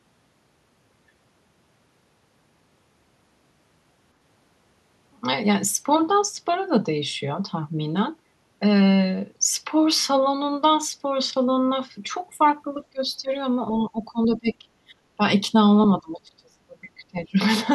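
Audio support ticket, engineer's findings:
Speech suppressed in double talk, 12.92–13.32 s, 13.73–14.67 s and 16.0–17.38 s: level drops in broken patches, deepest about 30 dB near the end. Likely the echo canceller treating near-end speech as loudspeaker echo during overlap.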